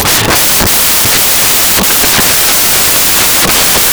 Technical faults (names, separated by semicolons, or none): samples built from the wrong bytes